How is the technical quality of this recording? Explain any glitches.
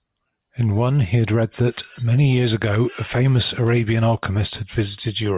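No glitches or technical faults can be heard anywhere in the speech recording, and the signal stays steady and intact throughout.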